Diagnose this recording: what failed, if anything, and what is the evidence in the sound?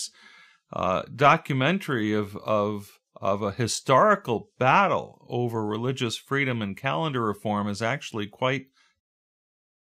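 Nothing here points to a failure at any stage, and the speech just eases away in a smooth fade-out starting around 9.0 s, the way an editor would close it off.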